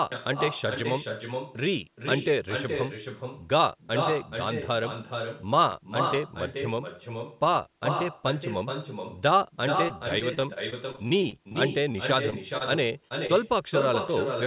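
Across the whole speech clip, the far end is playing the call through a loudspeaker that its microphone picks up, with no echo canceller to remove it. This is echo with no canceller: every phrase returns roughly 0.4 s later, about 6 dB below the direct speech, as a quieter, thinner shadow. Both the speech and its echo are confined below 4 kHz by the G.711 A-law call path.

From 5.72 to 5.74 s, fresh audio failed to reach the playback device in time, so it played its last block a second time. This repeated buffer lasts about 21 ms, which fits a 1024-sample buffer. No audio is lost, but the duplicated slice meets the real audio at a hard join. The result is a quick repeated fragment.

From 9.88 to 11.56 s, packets go missing or arrive late again and again. The receiver patches each hole by extending the last sound, and another hole follows before the speech can recover. About 17% of this stretch is concealed, and the longest single gap is about 26 ms. 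This repeated packet loss makes the speech choppy, with fragments clipped out.

Four isolated holes follow at 11.92–11.96, 12.30–12.34, 13.08–13.12 and 13.26–13.31 s. Each is a short concealed packet loss in which about 20 ms of audio never arrived. The decoder synthesised a stand-in from the preceding sound and then blended back into the real signal. Each is heard as a quick smear or wobble, and a brief consonant may drop out entirely.

From 12.58 to 12.62 s, a packet was late rather than lost, and the jitter buffer ran dry. This short stall from a late packet made the receiver hold the last sound for about 28 ms until the packet arrived, then resume from the same point. Nothing is skipped, but one sound lingers slightly too long, with a faint buzz or dip in level.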